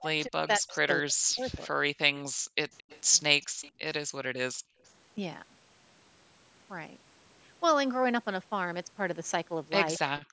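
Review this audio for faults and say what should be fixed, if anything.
Speech suppressed in double talk: when both ends spoke at once, the far end's echo canceller likely could not tell its own talker from loudspeaker echo and pulled the whole signal down. The speech dips by up to about 40 dB over roughly a second in total between 0.0 and 1.8 s, and again at the very end, from 10.13 s to 10.33 s. In each case the speech thins or breaks into pieces. A canceller with better double-talk detection, or a headset at that end, would prevent this.

Echo leak: a loudspeaker at the other end likely fed its microphone, and the echo canceller left part of that pickup in the returned signal. A faint copy of the speech arrives 221 ms late in short scraps at 2.17 to 2.22 s and 2.77 to 3.01 s, about 25 dB below the speech, and at 3.42 to 3.71 s, about 20 dB below. Lowering loudspeaker volume or using headphones at that end would stop the leak.

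Background gated by the echo canceller: during loudspeaker playback the canceller clamped the microphone hard, so the room sound disappears and then snaps back. The drops are about 38 dB at 2.29 to 2.57 s, about 37 dB at 3.46 to 3.61 s and about 35 dB at 4.53 to 4.83 s, each lasting a few hundred milliseconds at most. The call's microphone processing, with nothing above 8 kHz, is normal and not a fault. Gentler suppression or comfort-noise fill would hide these holes.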